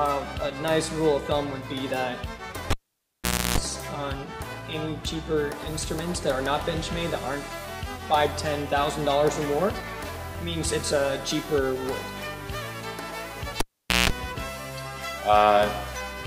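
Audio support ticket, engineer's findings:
Cable pulled and plugged in, 2.70 to 3.58 s. Pop, about 0.82 s dropout, then 0.31 s of 60 Hz mains buzz, pop on return. Live lead unplugged; tip contact alone picks up hum before full seating.

Repeat at 13.60 to 14.10 s. Same pop-dropout-pop pattern, about 0.45 s gap, 0.18 s of 60 Hz buzz. Check the connector and cable strain relief at the input jack.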